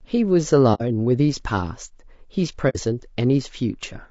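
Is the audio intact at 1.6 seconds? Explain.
No. Low-delay AAC compression runs through the whole clip, 1.6 seconds included. The speech sounds rough and grainy, with a noisy wash filling the gaps between voice harmonics and a top band that sounds thinned and synthetic. The likely cause is an AAC-ELD encoder: its short frames of about 10 ms cannot separate closely spaced pitch harmonics well. At a bitrate in the region of 32 kbps, too few bits remain to code them cleanly.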